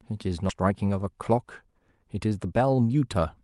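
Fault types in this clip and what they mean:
Skip ahead: At about 0.49 to 0.51 s the receiver discarded a chunk of audio, roughly 0.4 s of it, because newer audio was already queued, and playback lurched straight to that later material with no fill. On a waveform the envelope jumps abruptly from one shape to an unrelated one. On a spectrogram the harmonic lines and formant patterns break at a sharp vertical seam, with no silent gap between the two sides.
Jitter buffer speed-up: From 0.59 s to 2.81 s the buffer held more delay than its target, so it drained the excess by repeatedly cutting out pitch-period-sized slivers, roughly 200 ms in total. The speech plays about 9% faster at an unchanged pitch and sounds rushed. On a spectrogram the harmonic spacing stays the same while syllables and formant transitions crowd closer together in time. A waveform keeps the same cycle lengths, with whole cycles missing at the splice points.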